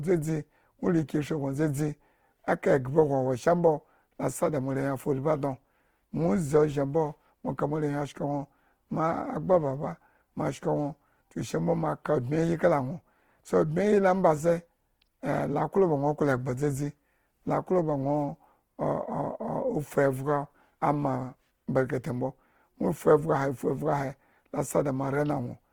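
Opus compression runs through the whole speech clip. The speech sounds grainy and rough, with tonal parts turned noisy. This is likely from the codec's music mode filling starved bands with folded or noise content, which fits a bitrate near 16 kbps, though content still reaches about 20.2 kHz.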